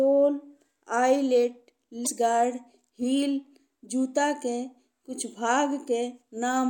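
At 2.03 to 2.07 s, a stretch of the compressed stream carrying this speech holds damaged data: some bytes were lost, zeroed or overwritten before decoding. The decoder cannot read those frames correctly, drops out of sync and hunts for the next valid frame header before normal playback resumes. The result is a sharp, unnatural chirp or blip lasting about 40 ms.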